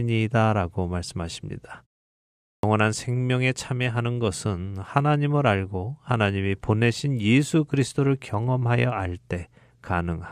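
At 2.55 s, speech resumes after a pause of about 0.77 s, and its opening is missing. This is a clipped start after a pause. The output device was still waking from silence, so about 83 ms was swallowed. The sound begins abruptly.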